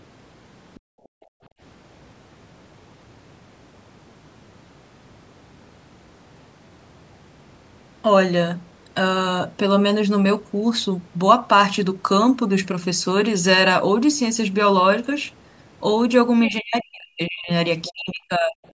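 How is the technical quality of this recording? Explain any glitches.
The speech recording has echo-canceller problems at the start and near the end, where the far end's sound leaks in and the processing cuts into the room sound and the talker.

Other side's voice leaking through: at 0.75 to 0.8 s and again at 17.84 to 17.91 s, brief scraps of a second voice are audible, roughly 30 dB and then about 20 dB below the talker. The likely cause is loudspeaker output that the echo canceller did not fully remove from the microphone.

Background gated by the echo canceller: from 0.8 to 1.6 s the room tone drops sharply, by as much as about 40 dB, for most of that span. The canceller clamped the microphone while the loudspeaker played, so the background dips out and then returns.

Speech suppressed in double talk: from 16.47 to 17.5 s and from 17.89 to 18.65 s the talker's voice dips by around 40 dB. 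This is likely both ends talking at once, which made the canceller attenuate the near talker along with the echo. The call-style band limit, with nothing above 8 kHz, stays steady throughout.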